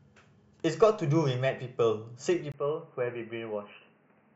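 At 2.52 s the speech turns abruptly dull and boxy and stays that way to the end. A brief gap of about 20 ms marks the change, after which nothing above 3 kHz survives, the level drops by about 5 dB, and a new background noise appears roughly 30 dB under the speech. The likely cause is an input switched to a poorer device, a narrower-band microphone or headset path with its own gain and noise floor.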